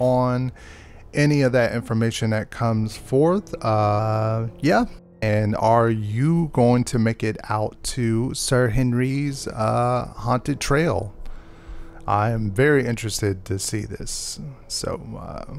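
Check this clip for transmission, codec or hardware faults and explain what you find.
Two drift correction steps, 3.99 to 5.29 s and 8.39 to 9.10 s: the sound jumps about 6% fast and a semitone sharp, then snaps back, likely from clock-matching software refilling or draining its buffer.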